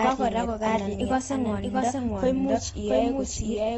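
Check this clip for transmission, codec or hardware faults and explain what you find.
Three faults are audible in this speech clip: a delayed second copy running throughout, codec damage throughout, and a brief pitch-and-speed jump.

Throughout, every sound repeats about 0.7 seconds later at roughly equal loudness, a clean, full-band copy with no room tail. This is likely a doubled audio track, where a second, slower capture path or a misaligned edit mixes the same audio in twice.

Across the whole clip the sound is dull and smeared, with nothing above 7.6 kHz and a fizzy, warbling edge on sibilants. That points to AAC compression, likely AAC-LC at a low rate around 24 kbps, quantising the spectrum coarsely and discarding the top band.

From 1.01 to 1.99 s the audio runs 6.36% fast and sits 107 cents sharp, just over a semitone, then snaps back to normal. This is likely a drift correction step, where clock-matching software abruptly changed the playback rate to rebalance its buffer.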